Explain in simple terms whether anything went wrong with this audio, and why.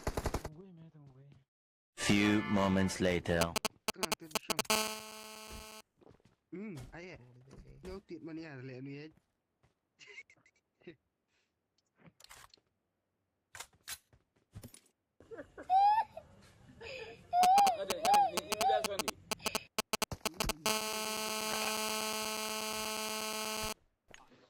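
A 2G mobile phone was close to the recording equipment, and the audio circuit picked up its radio pulses. These are GSM signalling bursts, from 3.41 to 4.61 s and again from 17.43 to 20.51 s: the phone was only exchanging short messages with the network, so it sounds like a galloping dit-dit-dit of brief 217 Hz buzzes.

Each time the phone then moved into a call, the interference became GSM phone buzz, from 4.70 to 5.81 s and from 20.66 to 23.73 s. The phone now transmits 217 times a second without pause, giving a steady, harsh, raspy buzz that has nothing to do with the sound itself.

At 14.59 to 14.63 s there is a short concealed packet loss. About 20 ms of audio arrived too late to be played, so the receiver patched the gap by stretching the preceding sound and blending back in, leaving a brief smear or wobble.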